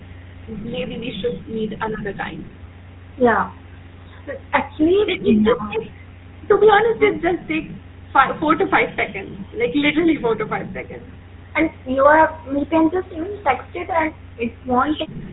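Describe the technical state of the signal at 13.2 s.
At 13.2 s the speech carries GSM full-rate codec damage, present throughout the clip. The coder models the vocal tract and excites it with regularly spaced pulses, keeping every third excitation sample, consistent with 13 kbps. The result is a plainly audible buzzy, gravelly roughness with nothing above 4 kHz.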